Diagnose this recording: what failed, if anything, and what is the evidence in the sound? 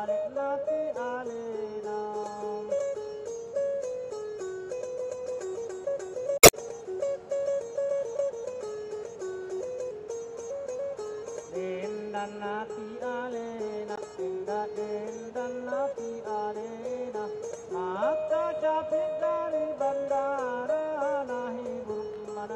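The codec stage failed: damaged data in the compressed stream produces brief disruptions from 6.36 to 6.54 s and from 13.94 to 13.99 s. The decoder misread corrupt frames and lost sync, so the waveform shows abrupt discontinuities at both points.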